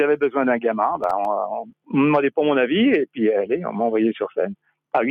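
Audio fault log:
Throughout: noise suppressor applied to music or sounds. Held tones and tails sink by about 5 dB while attacks pass, giving a pumping rather than sudden cuts.
1.04–1.25 s: processor overload crackle. A handful of missed deadlines leave tiny silent gaps, which fits buffers of about 1.5 ms, heard as gritty tearing, not one clean dropout.
1.62–1.94 s: sound cut by the noise suppressor. The affected audio, about a fifth of a second in total, falls by up to about 18 dB. It is a deep, isolated duck, not ongoing pumping.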